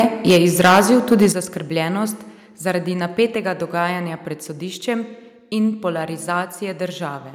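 From the start of the clip to 1.26 s the speech shows microphone overload: the loudest syllables have a harsh, crackling edge, with peaks flattened at the converter's limit. The signal is driven about 11 dB past what the converter can represent, so around one in twenty samples has its top sheared off. The likely cause is a microphone input volume set too high for the talker's level.

The microphone volume is stepped down twice. At 0.31 s the level drops by about 4 dB, while the crackle continues. At 1.32 s, just before "zaskrbljenost zaradi", it falls by about 9 dB, and the distortion is gone. Each change is an instant, single-step drop in both speech and background, consistent with call software reacting to a clipping input. The likely cause is automatic gain control lowering the device's input volume, with the first, smaller step not enough to clear the overload.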